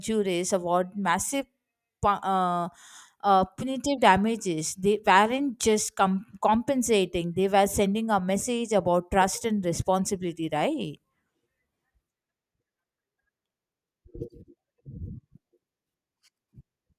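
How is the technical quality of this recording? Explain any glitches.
No audible glitches or faults.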